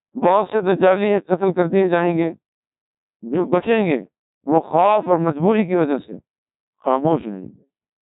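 From start to finish the speech has passed through the Codec 2 vocoder, at a low rate that fits roughly 1.2 kbit/s. Instead of the waveform, only pitch, voicing, loudness and a coarse spectral shape survive, and the decoder rebuilds the voice from synthetic sine waves. The result is heavily damaged: a robotic, buzzy voice, and nothing above 3.8 kHz, so the sound is dull throughout.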